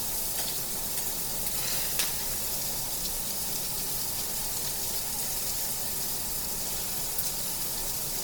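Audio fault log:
Throughout: Opus compression. Tonal parts of the sound come out rough and grainy, with a noisy texture where they should be clean, but there is little hollow swirling and the top end stays open across the full band. The likely cause is Opus in its music (CELT) mode running short of bits. It preserves each band's energy but rebuilds the detail from folded lower bands or noise, which fits a low rate near 24 kbps.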